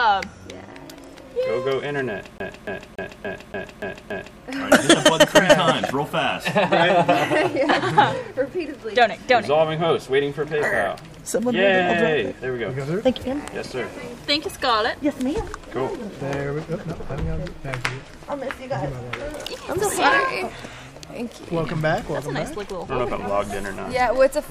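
CD stuck on one turn, from 2.38 s to 4.39 s: a scratch keeps knocking the laser back one track at the same point of each rotation, so a 287 ms piece of audio repeats seven times, with a short mute at every jump, giving a fast, even skipping stutter.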